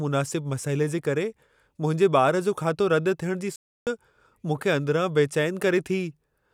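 A speech recording with a playback stall from 3.56 to 3.87 s: the sound cuts off mid-flow and the output falls silent for about 310 ms before it picks up again. The likely cause is the player running short of data or its playback thread being blocked. What sets this apart from a packet-loss dropout is the length. A dropout is a gap of a few tens of milliseconds, while this hard silence lasts nearly a third of a second.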